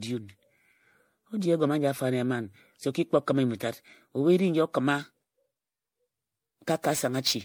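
A speech recording that sounds swirly, smeared and hollow throughout, with softened consonant attacks and no content above 16.5 kHz. The likely cause is generation loss: repeated MP3 encoding at 64 kbit/s, roughly four passes, each re-quantising on a shifted frame grid so the noise and spectral holes accumulate. From 5.01 s to the end, a hiss-like roughness rides on the louder, brighter parts of the speech and drops away in pauses. This is sample clock jitter: a timing wobble of several microseconds means samples are taken slightly early or late, creating an error about 15 dB below the signal that tracks how steeply the waveform is changing.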